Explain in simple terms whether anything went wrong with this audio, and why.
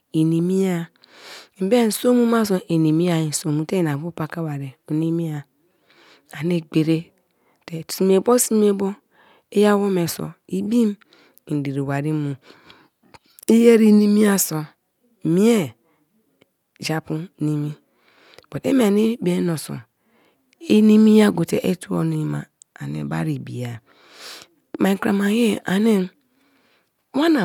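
Nothing went wrong here; the speech comes across steadily with no glitches, dropouts or odd noises anywhere along the way.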